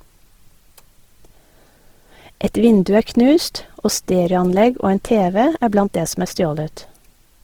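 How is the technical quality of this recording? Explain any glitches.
The technical quality is compromised by plainly audible compression damage throughout the speech, from start to finish. The cause is likely Opus compression in its music-oriented CELT mode, at a rate consistent with about 16 kbps. The bandwidth stays full, reaching roughly 20.3 kHz, but the encoder is starved of bits, so it fills bands by folding lower spectral content or injecting noise. This makes the voice sound rough and grainy rather than swirly. MP3 at a similar rate leaves spectral holes and watery swirling, while this keeps the band energy and turns tonal parts noisy.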